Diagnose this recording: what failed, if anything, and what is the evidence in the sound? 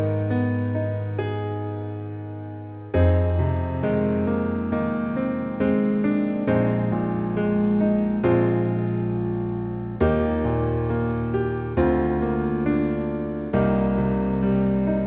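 Nothing here has failed; it's just an ordinary call path, and the lack of any content above 4 kHz fits a narrowband G.711-style codec doing what it's built to do.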